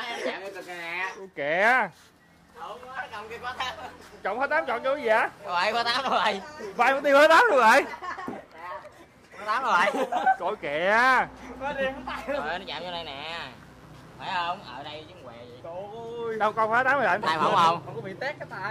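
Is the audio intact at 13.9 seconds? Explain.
No. From 12.53 to 14.68 s a mains buzz sits roughly 35 dB below the sound. Sharp switching spikes from the 50 Hz supply, two per cycle, spray harmonics up to several kHz. That gives a raspy edge, unlike smooth, low hum.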